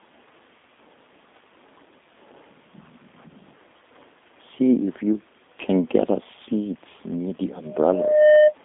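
Throughout the speech, the signal has been squeezed through a G.729 codec. Each 10 ms frame is rebuilt from a vocal tract filter, a pitch estimate and a handful of pulses, and the roughness suggests a low-rate stream of about 8 kbit/s. The damage is plainly audible: voices come out rough and faintly synthetic. The line passes only about 200 Hz to 3.6 kHz, so nothing above 3.7 kHz remains, leaving the sound narrow and dull.

From 7.65 s to 8.55 s, right after "us seats near the", a loudspeaker feedback squeal takes over. The microphone is picking up the loudspeaker it feeds, and around 608 Hz the loop gain has passed one, so that frequency reinforces itself on every trip round. The tone swells over roughly the first 0.7 s until it sits around 10 dB above the speech, a piercing whistle.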